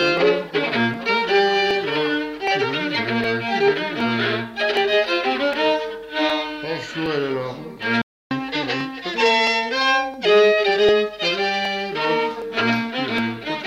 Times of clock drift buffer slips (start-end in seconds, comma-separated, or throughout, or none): 0.17-13.18